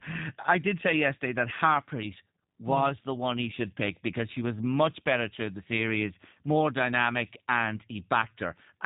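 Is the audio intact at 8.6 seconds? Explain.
No. At 8.6 seconds the speech sounds slightly rough and synthetic, with a dull, boxed-in tone because nothing above 3.8 kHz is present. This is G.729 codec damage, plainly audible across the whole clip. The codec does not carry the waveform itself. It rebuilds each short frame from a vocal tract filter, a pitch estimate and a few pulses, which fits an 8 kbit/s stream. That crude resynthesis causes the roughness.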